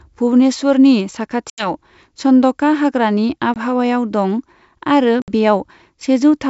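It's a speech clip carried over a wideband G.722 link, and it has packet loss on an ADPCM call, with hard-edged silent holes at 1.50 to 1.72 s, 3.54 to 3.57 s and 5.22 to 5.29 s. The lost stretches run about 80, 20 and 60 ms. Each gap throws the decoder's predictor and step size out of step with the sender's. The speech then comes back with a brief level or distortion wobble before settling within a few tens of milliseconds.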